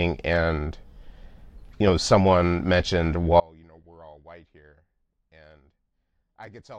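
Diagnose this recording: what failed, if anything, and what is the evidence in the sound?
Audio dropout to a faint residue at 3.4 s, right after "you know someone mentioned", continuing to the end: the speech cuts off abruptly, leaving only a faint sound around 30 dB down. The path stayed live but lost its source, likely a broken analogue wiring connection passing only leakage.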